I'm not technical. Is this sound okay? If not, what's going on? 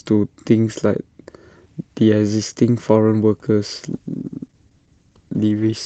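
No. From 3.91 s to the end, a call bitrate drop makes the connection send far less data, so the speech turns rough and muffled.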